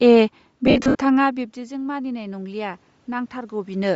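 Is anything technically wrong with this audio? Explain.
Yes. Throughout the clip the speech has a breathy, grainy edge, with the upper frequencies thinned out and replaced by a hiss-like texture. This is likely Bluetooth LC3 compression: the codec works in 10 ms frames and, at a low rate that fits about 32 kbps, discards much of the high spectrum and fills the gaps with noise.

From 0.67 to 0.95 s the speech breaks up into a smeared, noisy blur, with stretches that fade away. These are lost LE Audio frames. Around 190 ms of audio is missing, scattered across 280 ms, and the longest gap is under a tenth of a second. The decoder covers each gap by repeating the last spectrum with randomised phase and letting it decay.

Around 1.0 s the speech drops sharply, as though the talker leaned back from the microphone. From 1.17 s to the end, at 3.95 s, the voice and the room background then swell up together by about 8 dB. 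This is automatic gain rising: the gain control registers the quieter input and gradually turns its gain up to compensate.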